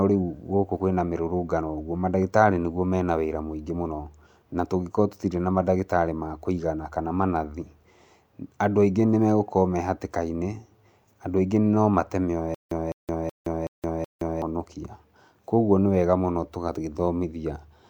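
The playback likely stalled and retried at 12.55 s, replaying its last fragment each time before running dry. Until 14.42 s this stutter with silent gaps repeats a 206 ms burst of speech five times, separated by 169 ms of digital silence, every 375 ms.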